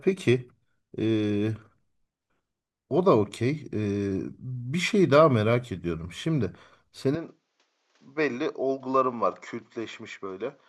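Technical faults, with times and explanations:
7.15–10.68 s, input switched to a poorer device: the recording most likely moved mid-take to a lower-grade microphone or input path. From 7.15 s to the end, the speech abruptly loses its top end, with nothing above 7.6 kHz, so it sounds duller and boxy. It also drops by roughly 5 dB and carries a faint new background noise well beneath it. There is no gap at the changeover, so the shift in tone is sudden and seamless.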